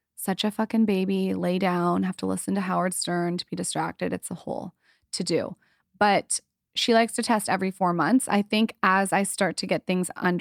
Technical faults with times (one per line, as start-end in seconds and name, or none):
none